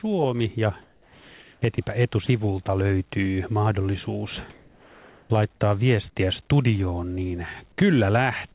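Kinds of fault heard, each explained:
Sound dropped by the voice detector: The sender's voice activity detector misjudged real sound as background and stopped transmitting, so the receiver filled the gap with comfort noise. From 0.82 to 1.62 s the signal gives way to steady noise, and about 300 ms of actual sound goes missing. Two brief 20 ms dropouts follow at 1.76 s and at 2.26 s, the second just before "löytyy mahdollisuus". A detector misfire is the likely cause.
Comfort noise in place of the background: During a pause the sender likely switched to discontinuous transmission, and the receiver synthesised noise roughly matched to the background. From 4.5 to 5.3 s, between "löytyy mahdollisuus" and "laittaa viestiä studioon niin", the real background, which sits about 29 dB below the loud passages, becomes a flat, featureless hiss about 3 dB quieter. It stays band-limited below 4 kHz, like the rest of the G.711 call path.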